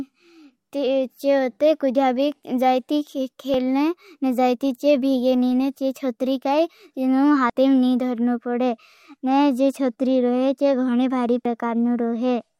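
Speech with audio missing between chunks: three skips at 3.54 s (just after "कुझा बी जाई थी"), 7.50 s and 11.45 s (just after "चे गोने भारी"), each dropping about 40 ms and spaced roughly 4 s apart. The likely cause is a recorder working in 4-second blocks that loses a sliver at each handover and butts the two sides together. On a waveform each shows as an abrupt splice with no silent gap, and on a spectrogram as a sharp vertical seam where harmonics jump.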